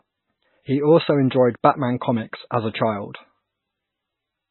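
From start to finish the speech sounds watery and swirly, with a metallic chirp on s sounds, smeared consonant onsets and nothing above about 4.1 kHz, which leaves it dull. The likely cause is heavy MP3 compression at a very low bitrate, which fits something near 14 kbps. Starved of bits, the encoder cuts the treble at a fixed point and drops weak frequency lines that flicker in and out between frames.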